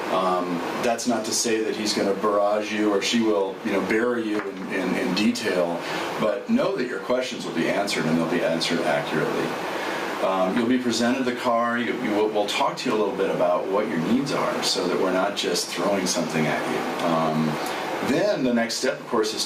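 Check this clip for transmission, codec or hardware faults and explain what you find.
There is one fault, gain pumping, running through the whole clip. The gain swings by around 20 dB, pulled down under each loud sound, squashing the dynamics. This likely comes from input gain set far too high with a fast limiter pulling it back down. A waveform shows flattened peaks with the level recovering between them, and a spectrogram shows the signal darkening under each loud event.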